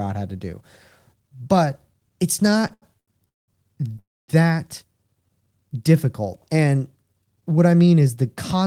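A speech recording with four network-timing faults clustered in the middle and near the end. From 2.45 to 3.50 s, packets kept reaching the receiver late, so its jitter buffer emptied eleven times in a row. This is repeated stalls (stutter): each gap was filled by extending the preceding sound, the longest fill lasting 193 ms, and concealment covers 43% of that stretch, so the speech drags and judders, yet nothing is lost. Shortly afterwards, between 3.92 and 3.96 s, a single late packet left the buffer empty once more, giving a short stall from a late packet: the receiver held the last sound for 18 ms before resuming at the same point, heard as a brief smeared hold. Then, from 3.99 to 4.30 s, comes a call audio freeze: the sound is drawn out into a fading continuation that falls into about 240 ms of silence before speech picks up exactly where it stopped, inserting a 295 ms gap, most likely because packets were held up in transit and the buffer ran dry. 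Finally, from 7.26 to 8.09 s, the buffer was carrying more delay than its target, as happens after late packets arrive in a burst, so the receiver trimmed many small pitch-period slices. That jitter buffer speed-up plays the speech at 109% of normal speed at unchanged pitch, removing about a tenth of a second and giving the passage a hurried feel.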